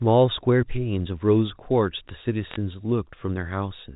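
From 2.48 to 2.56 s, bit errors on the digital phone line flip individual G.711 samples, producing sharp ticks and brief crackle over the speech.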